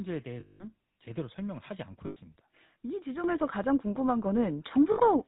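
Throughout, the speech carries the buzzy, gravelly roughness of the GSM full-rate codec. At about 13 kbps, its pulse-driven vocal-tract model rebuilds the voice from a sparse excitation and passes nothing above 4 kHz. This grain is steady rather than bursty, unlike packet-loss damage.

From 0.40 to 0.71 s, lost GSM frames leave a metallic ring as the last good frame is repeated. About 200 ms went missing, fitting ten 20 ms frames. A shorter hold of about 100 ms follows at 2.06 to 2.17 s.

At 3.24 s, the microphone volume is stepped up by about 8 dB. At 4.26 s, it rises by another 4 dB. Each time, voice and background noise jump together and then stay there, which sets it apart from a compressor's pumping.

The last lost GSM frames run from 4.92 to 5.00 s, a brief ring of about 60 ms.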